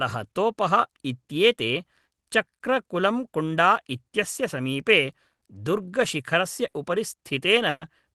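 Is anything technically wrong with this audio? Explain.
Yes, there are two bursts of packet loss, at 6.67–6.76 s and 7.69–7.84 s. Packets went missing, so the receiver held and faded the last sound for about 60 ms, then 120 ms, the second ending in a 20 ms silence. The skipped speech never returns. It sounds like a held sound fading out followed by a jump. On a spectrogram the spectrum freezes and dims, then changes abruptly. The waveform decays through the gap.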